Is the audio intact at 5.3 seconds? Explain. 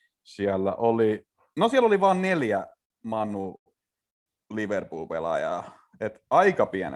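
Yes, the speech is intact at 5.3 seconds, with no dropout, click, distortion or other fault at that moment.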